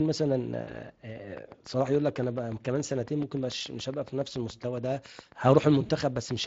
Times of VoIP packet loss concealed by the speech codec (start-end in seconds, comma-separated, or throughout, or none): 0.61-0.78, 5.85-5.91